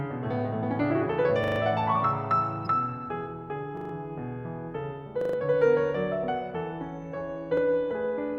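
At 1.44 to 1.6 s, 3.77 to 3.93 s and 5.21 to 5.37 s the music stutters, a 40 ms slice sounding five times in a row with a hard join each time, and at 7.57 to 7.61 s one slice plays twice. This is a repeated buffer: new audio arrived late, so the device replayed its last buffer, with nothing skipped afterwards. Between the first two stutters, at 2.63 to 2.67 s, a brief glitch cuts in. This is damaged data in a compressed stream: corrupted bytes made the decoder misread frames and lose sync until it found the next frame header.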